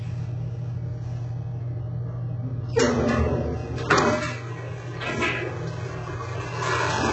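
HE-AAC compression, likely, runs throughout: nothing survives above 8 kHz, and the treble is rebuilt from copied lower bands. The result is gritty and metallic, consistent with a very low bitrate around 8 kbps.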